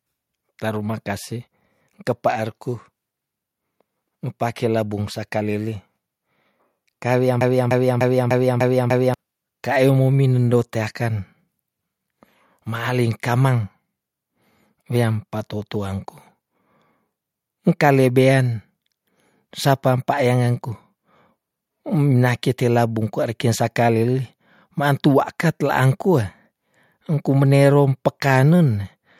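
From 7.41 s to 9.14 s the speech falls into a broken-record loop: a 0.30 s fragment repeats six times back to back, identical each time. A stalled player or stream likely kept resending its last fragment. Unlike an echo, nothing fades or overlaps, and the speech meant for that stretch is lost.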